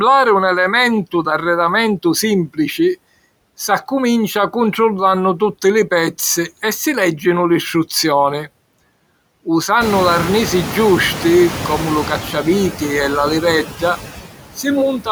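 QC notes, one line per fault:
Throughout, noise suppressor artifacts: the suppressor pulls down bands it judges to be steady noise by about 18 dB, so the background dips between phrases and swells under the speech. A spectrogram shows the noise floor pumping in step with speech.
9.8 to 12.18 s, noise suppressor catching up: the room noise jumps about 20 dB near 10 s, and the suppressor's estimate trails it for about 2.4 s, cutting only about 5 dB at first. A spectrogram shows a bright broadband noise band that thins gradually as the estimate catches up.
13.64 to 13.83 s, speech cut by the noise suppressor: just after "e la", the suppressor mistakes part of the speech for noise and drops it by up to about 10 dB for roughly a tenth of a second, leaving the sound swallowed. The waveform shows a brief sag in the envelope, and the spectrogram shows faded energy there.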